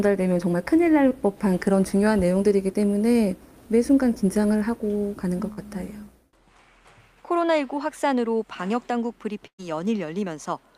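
At 1.09 to 1.13 s, a short concealed packet loss means about 20 ms of audio arrived too late, so the decoder extended the previous sound, leaving a brief smear. Bursts of packet loss follow at 5.53 to 5.59 s and 9.47 to 9.60 s, where consecutive packets went missing (40 ms, then 120 ms). Concealment stretched the last sound and faded it, in the second case into 80 ms of silence, before the audio resumes with material skipped.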